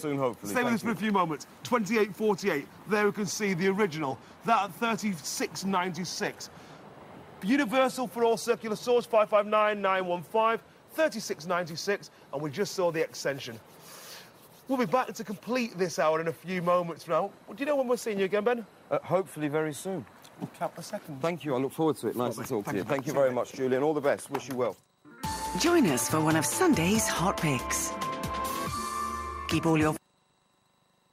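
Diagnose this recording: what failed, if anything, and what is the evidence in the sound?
Nothing failed; no fault is audible at any stage.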